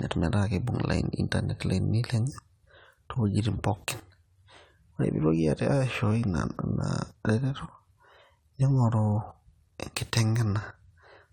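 Generation loss runs throughout the speech, from start to finish. The sound is swirly and hollow, with smeared consonant attacks and a watery shimmer that is heavier than a single encode at this quality would leave. Content stops near 19.9 kHz, which fits AAC-LC at around 96 kbit/s. The likely cause is repeated lossy re-encoding, perhaps seven or so passes, each requantising on a shifted frame grid so noise and spectral gaps pile up.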